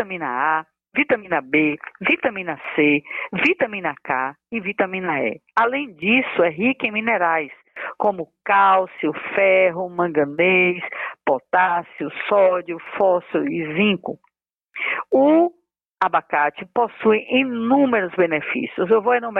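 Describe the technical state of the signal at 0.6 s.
At 0.6 s the signal carries periodic clock jitter, which runs through the whole clip rather than starting or stopping here. The converter's clock is being shaken at a steady rate of around 100 Hz. That timing wobble puts sidebands roughly 100 Hz above and below every component of the sound, and higher frequencies get stronger sidebands. The result is a rough, metallic edge on the audio that disappears whenever the sound falls silent.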